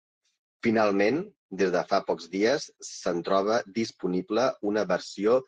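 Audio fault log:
Nothing faulty can be heard in this speech clip. There is no event to log at any point in the audio.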